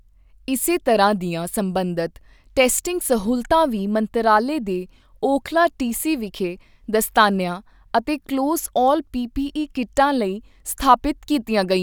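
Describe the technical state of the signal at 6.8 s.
At 6.8 s the speech signal is intact, with no technical fault present at that moment.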